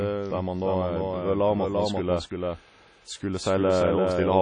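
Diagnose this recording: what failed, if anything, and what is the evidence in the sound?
There's a doubled audio track running the whole way through. A second, full-band copy of the speech trails the original by about 0.3 seconds and sits roughly 5 dB down. It's dry, with no decay or room colour, so it's clearly not reflections. The likely cause is either the signal getting captured a second time through a slower path or an edit leaving two copies out of step. The sound alone doesn't tell us which.

On top of that, the codec stage has left plainly audible WMA compression damage across the clip. Nothing comes through above 9.9 kHz, and the speech carries that ringing, washy texture with hiss that swells and falls along with the signal. That's the transform codec's quantisation noise smearing over long blocks and dropping weaker spectral lines. The character fits an early WMA version at a low rate, likely somewhere around 32 kbps.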